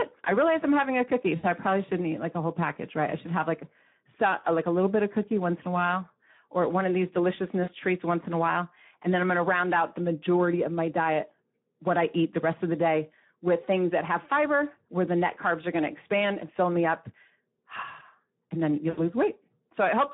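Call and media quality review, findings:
Speex codec, throughout: hoarse, noisy speech with plainly audible coding damage. Band limited to about 150 Hz–3.7 kHz, nothing above. Sparse CELP excitation starves fine detail, consistent with a low-rate mode near 11 kbps.

VoIP packet loss concealed by the speech codec, at 1.35–1.45 s, 7.64–7.71 s and 18.89–19.13 s: speech smears into a fading buzzy tone or coloured noise. Decoder extrapolates last pitch and filter, lowering gain; gaps fit about 80, 40 and 80 ms lost, with weakened recovery afterward.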